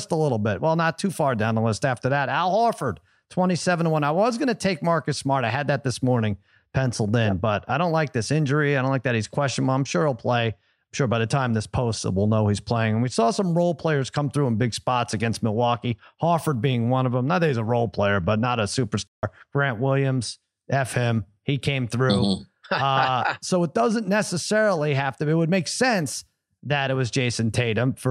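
At 19.07 s, right after "player but not a", the speech cuts to silence for about 155 ms until 19.23 s, then continues. This playback stall likely comes from the player running out of buffered data or its thread being blocked briefly.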